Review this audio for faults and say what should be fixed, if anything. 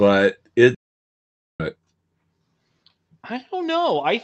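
A playback stall interrupts the speech at 0.75 s. The output drops to silence mid-flow and stays silent until 1.60 s, a gap of about 0.85 s. Then the speech resumes. The likely cause is the player running out of buffered data, or its audio thread being blocked, so nothing reached the output until it recovered. The speech arrives through a call codec path band-limited to about 8 kHz. To prevent the stall, keep the audio thread unblocked and its buffer fed ahead of playback.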